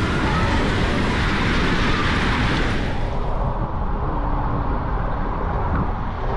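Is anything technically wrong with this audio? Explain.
No, nothing stood out as technically wrong on listening.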